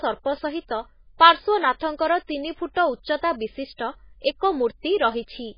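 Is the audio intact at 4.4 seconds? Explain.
No. At 4.4 seconds the speech shows heavy MP3 compression damage, present throughout the clip rather than only at that moment. The encoder was likely starved of bits, a level that fits a rate around 16 kbps, so it cut all content above 5.1 kHz and zeroed weak frequency lines that flicker on and off from frame to frame. The result is dull, band-limited audio with a watery, swirling texture, chirpy sibilants and smeared onsets.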